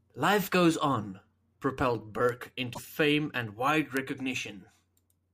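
A bit error spike at 2.29 s affects two consecutive samples. A single flipped bit, in memory or on a digital link, throws each sample's value off by a power of two before the waveform snaps back. The result is one sharp, broadband tick that bears no relation to the speech around it.

Damaged data in a compressed stream follows from 2.71 to 2.79 s, just before "fame and wide". For roughly 80 ms the decoder meets corrupted frames, whether from missing, zeroed or foreign bytes. It loses its place and has to hunt for the next valid frame header, which produces a brief chirp, squawk, click or short hole in place of clean audio.

A second bit error spike lands at 3.97 s, after "fame and wide", and this time hits just one sample. It is the same isolated click from a single flipped bit.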